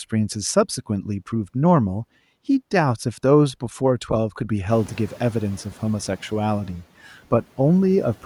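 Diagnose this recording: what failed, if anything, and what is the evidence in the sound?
A noise suppressor catching up, in call processing. Room noise jumps by about 21 dB near 4.5 s. From 4.7 to 5.43 s it passes with less reduction, then sinks by about 5 dB. The suppressor's noise estimate took 730 ms to follow the rise.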